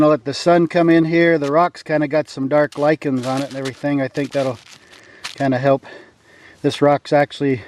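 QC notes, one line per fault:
No faults found on this pass.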